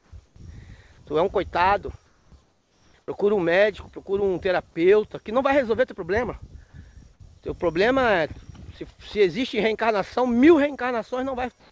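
Comfort noise in place of the background at 0.00, 0.26, 2.06, 2.42 and 11.60 s. Pauses turn steady and featureless, about 2–3 dB quieter, though the last is about 6 dB louder. The likely cause is discontinuous transmission.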